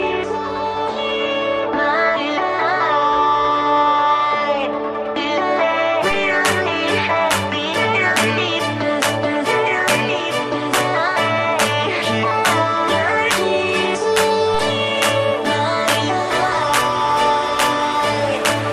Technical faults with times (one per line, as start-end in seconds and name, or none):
14.54 DC step